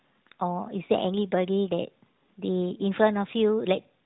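No technical faults are audible.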